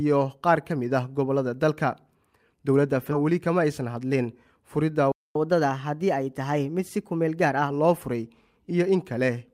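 At 3.11 s, about a second of audio was discarded while later audio was already queued. This is a skip ahead: playback jumps forward with no gap, and the two sides join abruptly.

From 3.21 to 3.96 s, the jitter buffer is holding excess audio and trims short pitch-period pieces, removing about 70 ms in total. This jitter buffer speed-up plays the sound at 107% speed with unchanged pitch, so it feels slightly hurried.

From 5.12 to 5.36 s, the player most likely ran out of data. The result is a playback stall: the output falls silent mid-flow for about 235 ms before resuming.

From 5.36 to 7.70 s, the player works off the backlog by resampling at 1.1 times normal speed. This catch-up at higher speed raises the pitch by about one and a half semitones until normal playback returns.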